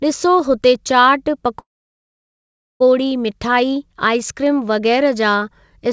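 From 1.60 to 2.82 s the speech falls silent, then resumes where it stopped, likely a call audio freeze from late packets emptying the jitter buffer.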